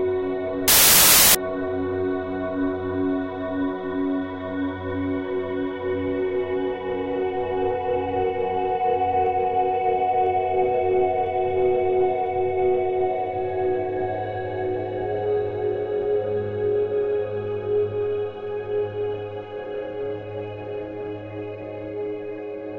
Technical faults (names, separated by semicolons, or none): samples built from the wrong bytes